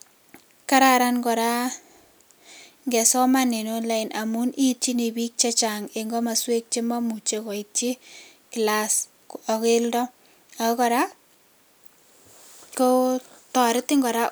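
No technical faults are audible.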